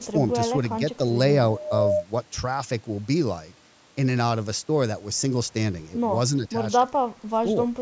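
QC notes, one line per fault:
1.64–1.69 s, echo leak: a brief, very faint delayed copy of the speech, far below the main voice, arrives about 279 ms late. This is likely a far-end loudspeaker echo that the echo canceller failed to fully remove and sent back down the line.
6.37–6.54 s and 6.89–7.46 s, speech suppressed in double talk: the voice dips slightly in the first stretch and drops far deeper for much of the second. This is likely the echo canceller mistaking overlapping talk for echo and turning down the talker too.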